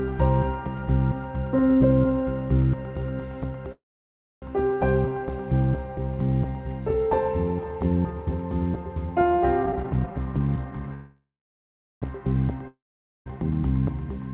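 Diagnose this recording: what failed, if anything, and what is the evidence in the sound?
Two call audio freezes, at 3.72–4.44 s and 10.94–12.04 s, sit at the network and jitter-buffer stage. Each begins with a brief fading buzz or hiss, then goes silent for 0.62 s and 0.77 s. The audio resumes intact but about 0.7 s and 1.08 s later. On a spectrogram, a decaying smear gives way to a blank gap. The likely cause is delayed packets draining the buffer.

A jitter buffer speed-up runs from 9.63 to 10.88 s. The sound hurries at about 145% speed with unchanged pitch, because repeated pitch-period-sized pieces were cut to shrink an overfull buffer. About half a second was removed. The waveform looks compressed in time, and harmonic spacing stays fixed on the spectrogram.

A long network dropout at 12.68–13.28 s removes about 0.58 s of audio outright, likely from packets that never arrived. A short fading buzz or hiss precedes 0.48 s of silence. 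The sound then returns further along with no added delay. On the spectrogram, the gap is blank across all frequencies, and throughout the clip nothing appears above the call path's 4 kHz ceiling, which fits 64 kbps G.711 A-law.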